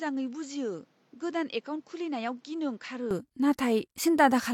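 From 0.0 to 3.11 s the speech is dull and quieter, cut off above 7.6 kHz, with faint extra noise: likely the input switched to a poorer device.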